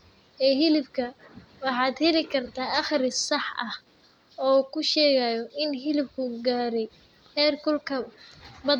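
No technical faults can be heard anywhere in the speech.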